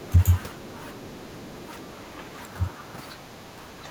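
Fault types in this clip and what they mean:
Other side's voice leaking through: from 0.02 to 1.94 s a faint second voice sits well beneath the main speech, roughly 25 dB down. This is likely far-end audio from a loudspeaker reaching the microphone, with part of it left behind by the echo canceller.
Speech suppressed in double talk: from 0.96 to 1.12 s the speech dips by around 15 dB, and from 3.16 s to the end by a milder 5 dB or so. The likely cause is an echo canceller that, facing both sides at once, turned everything down.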